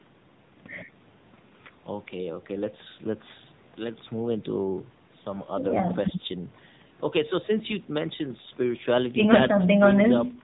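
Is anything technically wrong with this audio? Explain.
Yes. The whole clip has been through the AMR narrowband mobile codec, and the damage is plainly audible from start to finish. AMR-NB samples at 8 kHz, so everything above 4 kHz is gone, which leaves the speech boxed-in and dull. It rebuilds the voice from a vocal-tract model fed a few pulses per subframe, and at this low a bit budget, which sounds like the 7.95 kbps mode, that comes out buzzy and noticeably synthetic.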